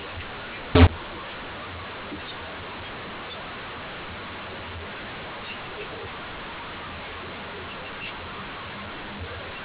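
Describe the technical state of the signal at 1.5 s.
At 1.5 s the speech carries a mu-law and A-law mix-up, present across the whole clip. The audio was written with mu-law but read back as A-law. The two logarithmic scales map the same 8-bit codes to different levels, so loudness is scrambled. Some peaks jump, others shrink, and the quietest samples rise well above silence. The speech sounds harsh and gritty, and gaps fill with noise. The telephone band still stops at 4 kHz.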